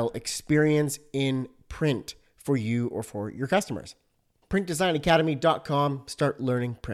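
No technical faults are audible.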